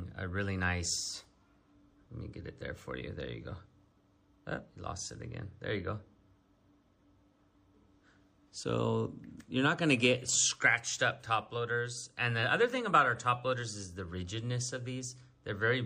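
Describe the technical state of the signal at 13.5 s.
At 13.5 s, as throughout the clip, the sound is watery and swirly, likely from MP3 compression at a bitrate around 64 kbps. On a spectrogram, the treble stops at a hard ceiling, with weak bands flickering on and off.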